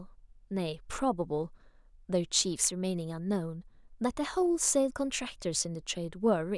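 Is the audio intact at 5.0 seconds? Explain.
Yes, the speech at 5.0 seconds is intact, with no dropout, click, distortion or other audible fault at that moment.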